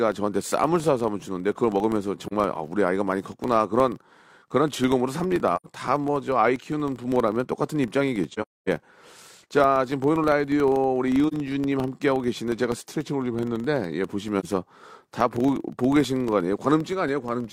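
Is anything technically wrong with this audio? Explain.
Yes. A filter restarted on every block causes a 25 Hz buzz throughout the speech. Each block starts from silence, leaving a small tick that follows the level.

AAC frame loss with muting leaves brief dips and soft-edged holes at 2.27–2.33, 5.56–5.67, 8.33–8.69, 11.28–11.34 and 14.40–14.45 s. Lost frames decode as silence. The longest gap, about 300 ms, fits several frames in a row.

From 12.88 to 13.66 s, speed drops 5.66% and pitch falls about a semitone. This is likely a drift correction step.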